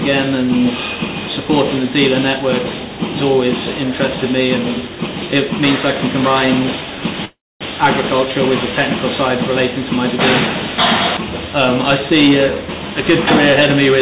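At 7.25 s the audio stalls for about 0.39 s, through to 7.64 s. It's a call audio freeze. The last bit of sound gets stretched into a short fading buzz or hiss, then there's a quarter-second of silence before things pick up exactly where they left off, so nothing's lost, just pushed later by around 356 ms. The likely cause is packets held up in transit, leaving the jitter buffer empty. The call path's band limit at 4 kHz, fitting 64 kbps G.711 A-law, is present throughout.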